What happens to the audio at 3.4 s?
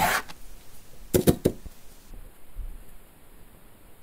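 Channel delay (comb filtering) is present at 3.4 s, within a span running from 2.11 s to the end of the clip. One channel trails the other by only a few samples, a small fraction of a millisecond, and when the two are summed to mono, the shared content cancels where the offset puts them out of phase. The first deep notch falls around 7 kHz, so the sound turns dull and hollow, losing upper brightness.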